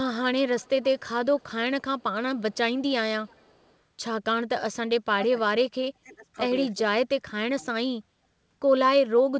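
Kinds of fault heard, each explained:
Echo leak: a very faint delayed copy of the speech, trailing about 0.32 s behind the direct sound and sitting far below it, surfaces in four short scraps between 0.59 and 3.75 s. The fixed lag marks it as returned audio, likely a loudspeaker's output getting past an echo canceller. Room reverberation would instead decay smoothly straight after the sound, not repeat it as a separate copy a third of a second later.
Speech suppressed in double talk: the talker's level drops in pieces from 4.72 to 7.91 s. There is a brief, shallow dip of roughly 10 dB first, then deeper cuts of around 30 dB or more, each lasting about half a second or longer. This is likely an echo canceller clamping down while both sides spoke at once. Unlike packet-loss dropouts, these gaps span stretches of overlapping talk and run for hundreds of milliseconds rather than appearing as short, regular holes.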